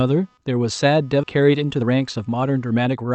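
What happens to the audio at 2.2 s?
At 2.2 s the sound is inside a jitter buffer speed-up that runs from 1.34 s to 3.12 s. The receiver's buffer had built up more audio than it wanted. To shrink the delay, it cut out short slices of one or a few pitch periods, over and over. The audio plays at about 114% of normal speed, with the pitch unchanged. It sounds hurried. Roughly a third of a second is dropped across the span.

Computer activity noise is also present at this moment, as it is throughout the clip. Changing load from the processor, graphics card or mouse disturbs the shared ground of the audio circuit. The result is a faint buzz with a pulse rate of around 300 Hz. It sits far below the sound, roughly 40 dB down. It follows the computer's activity, not the sound itself.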